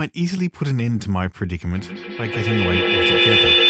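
Feedback howl takes over this speech clip from 1.74 s to the end: sound from a loudspeaker in the same room re-enters a microphone on the call, gaining level each trip, so a tone near 4 kHz swells to about 8 dB above the speech, the loop repeating roughly every 150 ms.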